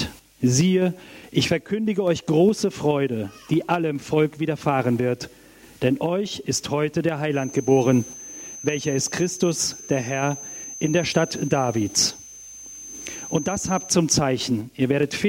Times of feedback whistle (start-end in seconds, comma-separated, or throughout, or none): 7.29-14.00